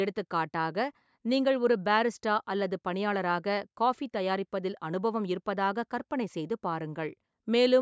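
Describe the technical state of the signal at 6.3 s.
At 6.3 s the speech is intact, with no fault, only the normal call microphone processing that trims the lowest bass and leaves nothing above 8 kHz.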